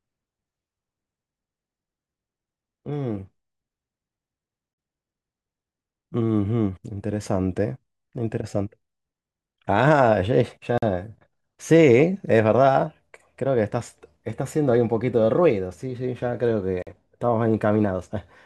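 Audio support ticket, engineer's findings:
Gap between chunks in the speech at 4.74–4.78 s, 10.78–10.82 s and 16.82–16.87 s: 44 ms hard-edged silences every 6 s. Chunk joins, from player scheduling or codec padding. Unlike dropouts, nothing is lost; sound resumes exactly where it stopped.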